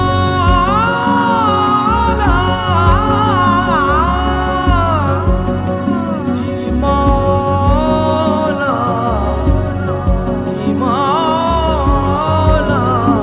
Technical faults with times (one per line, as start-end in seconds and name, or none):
none